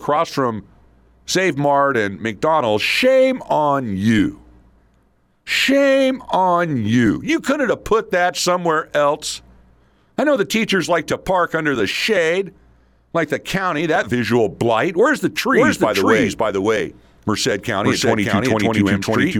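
At 15.53 s a doubled audio track appears and runs to the end of the clip: the speech is heard twice, with a second copy trailing about half a second behind and at roughly the same loudness. It is likely caused by the audio being captured a second time through a slower path. Unlike a room echo or reverb, the copy doesn't decay or take on room colour. It stays full-band and switches in abruptly.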